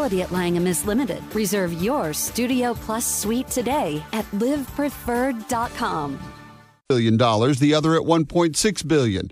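Nothing goes wrong anywhere in this one, so there's no fault to point to at any moment along the way.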